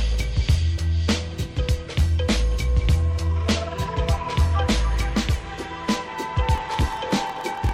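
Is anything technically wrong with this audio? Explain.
Yes. From 6.53 s to the end at 7.74 s there is a block size mismatch (padded). One stage hands over blocks shorter than the 1024 samples the next stage reads, so every block ends in a stretch of zeros. That puts a 43.1 Hz buzz over the sound, which runs at 0.938 times normal speed with its timbre kept. The waveform shows regularly spaced flat gaps, and the spectrogram shows thin vertical dropouts at the same spacing.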